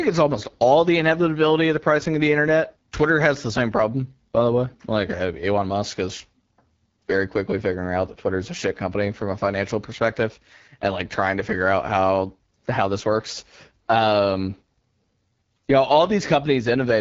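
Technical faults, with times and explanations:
Throughout, AMR wideband (HD Voice) codec: the whole speech clip has that HD Voice phone-call character, with nothing at all above about 7.5 kHz and the top band filled with a thin, hissy layer instead of real detail. The codec damage is plainly audible, a rough, raspy edge on the voice. That points to one of the lowest AMR-WB modes, around 8.85 kbit/s, where the vocal tract model gets too few bits to shape the sound cleanly.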